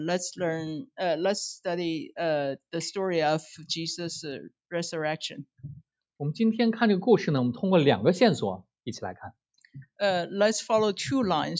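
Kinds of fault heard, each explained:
Nothing stood out on listening, with the call microphone processing heard only as the expected trimming of the lowest bass and a top end that stops at 8 kHz.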